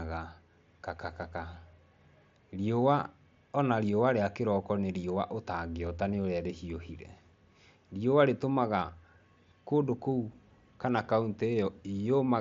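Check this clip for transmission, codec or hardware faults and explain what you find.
No transmission, codec or hardware faults turn up in this speech, which arrives over a Bluetooth mSBC headset link working as designed, its band reaching up to 8 kHz with only the light graininess on louder passages that this codec's fixed bit budget leaves behind.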